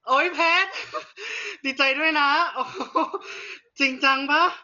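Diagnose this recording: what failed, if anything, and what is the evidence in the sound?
Codec stage. Throughout the speech nothing sits above 6.9 kHz, and the sound is dull and heavily damaged, with rough, fluttering noise around tones. This is likely Dolby Digital compression starved of bits, fitting about 40 kbps: the band was narrowed and unfunded frequency lines were filled with dither noise.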